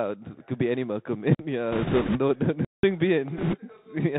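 The speech runs through a Bluetooth CVSD headset codec from start to finish, and the damage is plainly audible. CVSD sends a single up-or-down bit per sample at 64 kHz, with a step size that adapts to the signal, so nothing above 4 kHz survives. The audio sounds boxed-in and narrow. Sibilants turn scratchy where loud high-frequency energy outruns the step size, and a fine granular hiss sits under the whole clip.

At 1.35 s a block of digital silence cuts in and lasts about 46 ms, until 1.39 s. Its length fits a 2048-sample buffer that was not filled in time. The output drops straight to zero and back with no fade, so the hole has abrupt edges.

From 1.72 to 2.20 s, bit errors on the Bluetooth voice link add a rushing, crackly noise over the speech, with roughly 7 percent of bits flipped. Each CVSD bit carries the same small weight, and the decoder's state recovers from errors quickly. Because of this the corruption comes through as dense crackle rather than loud pops.

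A second, longer block of digital silence runs from 2.65 to 2.83 s, about 186 ms. That length points to an 8192-sample buffer. It is heard as a clear dropout with abrupt edges.

Bit errors return from 3.37 to 3.58 s at around 5 percent. The crackle is lighter than in the earlier burst.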